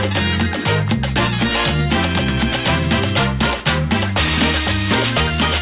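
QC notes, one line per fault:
throughout: aliasing. The sample rate was reduced without an anti-aliasing filter, and the fold at 4 kHz points to an 8 kHz rate. Energy above 4 kHz mirrors back as unrelated tones about 10 dB under the signal, giving a gritty, metallic top crammed against the band edge.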